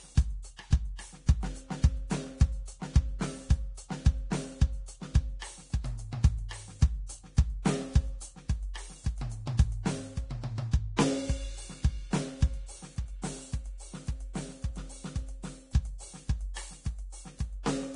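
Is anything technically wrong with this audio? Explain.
Yes. Throughout the music, the treble sounds hissy and grainy, tones are roughened and attacks blurred, with nothing above about 10.6 kHz. This is likely heavy Vorbis compression, which fits a bitrate around 31 kbps and turns coarsely quantised high-frequency detail into noise.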